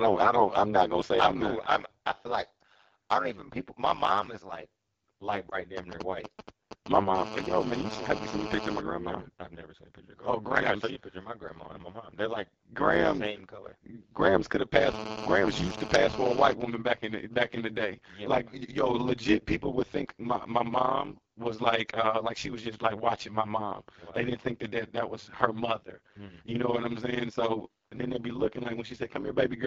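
Throughout the recording a metallic buzz rides on the speech. This is overlap-add ripple: the audio was split into windowed frames and rejoined with overlaps whose gains do not add to a constant, so the level dips once per frame, at around 100 Hz, with a depth of about 60 dB. That gives a metallic buzz with extra tones around the voice. Unlike codec roughness, it is a regular amplitude pulsation rather than a texture change, and it stays fixed in rate whatever the speech does.

Also present throughout is the AMR wideband (HD Voice) codec at a low setting. The raspy, grainy quality points to one of its two lowest modes, consistent with 8.85 kbit/s. At that rate the pulse-driven vocal tract model cannot rebuild fine detail below 6.4 kHz, and the band above it up to 7 kHz is filled with shaped noise, so the speech sounds rough and raspy. This is a steady coloration, unlike the rhythmic pulsation of the ripple.

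From 5.49 to 5.58 s there is one lost AMR speech frame, 20 ms of data. The decoder repeated the last good pitch and vocal tract settings at falling gain, and the speech resumes slightly weak and rough, spreading the effect over about 90 ms. It is heard as a brief warble or dip, not a click or a gap of silence. That tells it apart from a plain dropout, since the sound keeps its character while briefly smearing.

From 5.77 to 6.97 s come GSM signalling bursts, around 10 dB below the speech. A nearby 2G phone exchanging only short groups of bursts with the network had its radio pulses rectified by the audio circuit, producing a galloping dit-dit-dit of brief 217 Hz buzzes. The broken, rhythmic grouping is what separates this from the continuous buzz that follows.

The GSM phone buzz appears from 7.15 to 8.81 s and again from 14.75 to 16.53 s, each time about 9 dB below the speech. A 2G phone in a call transmits 217 bursts per second, and rectification turns them into a hard, raspy 217 Hz tone rich in harmonics, unrelated to the speech. 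It is steady while it lasts, with no galloping pattern. Its constant pitch also separates it from the codec's rasp, which follows the speech.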